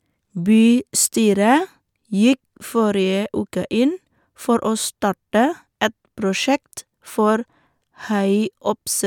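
No technical faults can be heard anywhere in this speech recording. The sound carries on without any break, jump or sudden change at any point.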